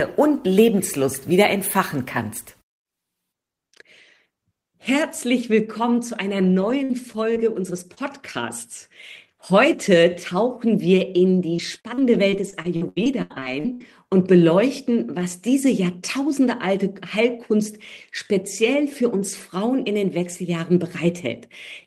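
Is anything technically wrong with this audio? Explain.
Yes. Repeated packet loss (robotic sound) occurs from 6.61 to 7.99 s and again, more heavily, from 11.57 to 13.82 s. Lost packets leave short holes, up to 80 ms, each patched by extending the preceding sound, so the audio turns choppy with pieces missing.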